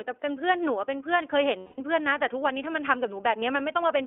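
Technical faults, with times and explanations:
throughout, iLBC codec: band limited to 300 Hz–3.5 kHz, with plainly audible rough, synthetic coloration from independently coded 20 ms frames, which fits the 15.2 kbps mode.
1.58–1.80 s, lost iLBC frames: a 200 ms gap heard as a held, buzzy vowel-like tone, the decoder repeating the last pitch cycle with noise; this fits ten lost frames.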